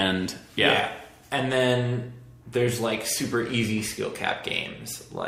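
No technical faults can be heard anywhere in this clip.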